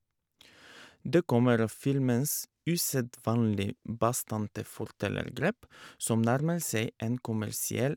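No technical faults can be heard anywhere in the recording.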